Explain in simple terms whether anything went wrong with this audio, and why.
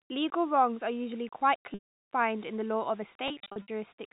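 Two things went wrong here. First, the whole clip has a grainy, gritty edge that clings to the speech and gets rougher on quieter sounds, with a roughness riding along with the voice. The likely cause is low bit depth without dither: the audio seems to have been rounded to very few levels, something like 7 bits, and with no added noise to smooth the steps, the rounding error tracks the signal as distortion instead of a steady hiss. The telephone-style band limit from the G.711 coding is there too, but that part is just the phone line behaving as designed.

Second, there are two stretches of packet loss with pitch repetition. From 1.74 to 2.06 s, the receiver lost a solid chunk of audio and covered it by repeating the last bit of voice. You hear a held, buzzy tone that fades to silence before the speech cross-fades back in. From 3.28 to 3.68 s the losses are scattered, with the longest gap about 60 ms, so you get several brief buzzy stutters.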